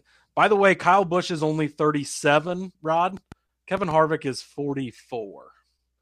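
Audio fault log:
3.17 to 3.92 s, train of clicks: A short burst of ticking sits on top of the speech. About five sharp pulses arrive, roughly 5.4 per second, at an uneven pace. Each click has much the same shape. They reach about the level of the speech itself. The likely cause is interference from nearby equipment or a faulty connection or power supply injecting repeated pulses into the signal path.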